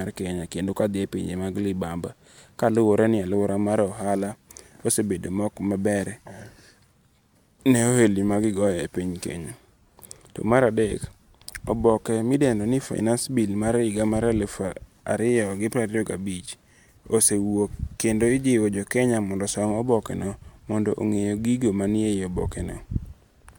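No technical faults are audible in this speech.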